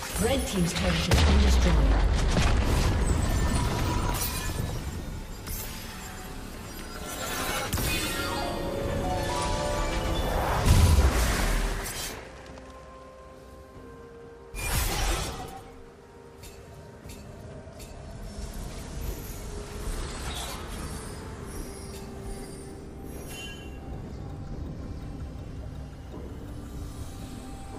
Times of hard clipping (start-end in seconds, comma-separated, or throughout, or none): none